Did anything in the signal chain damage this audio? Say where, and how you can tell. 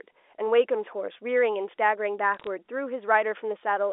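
Yes. Between 2.34 and 2.47 s, on a digital line carrying G.711 A-law, there is a short burst of bit errors in the transmission stage. Each flipped bit corrupts a single sample, and a hit on the sign or a high-order bit throws that sample far from its neighbours, producing sharp isolated ticks and crackle. The error rate is low, on the order of one bit in a thousand. Packet loss would leave gaps or smeared concealment instead, but here the speech under the ticks stays intact and continuous within the 300 Hz to 3.6 kHz telephone band.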